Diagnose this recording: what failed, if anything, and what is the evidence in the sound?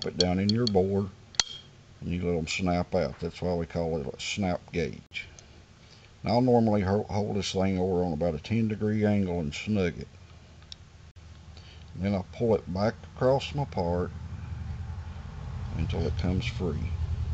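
Gap between chunks at 5.06 to 5.11 s and again at 11.11 to 11.16 s: two hard-edged holes of about 48 ms, 6 s apart. The fault is at the storage or playback stage, where silence was inserted at each 6 s chunk join rather than sound being lost.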